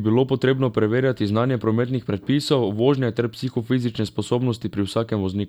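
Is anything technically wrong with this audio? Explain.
No, nothing technically wrong can be heard here.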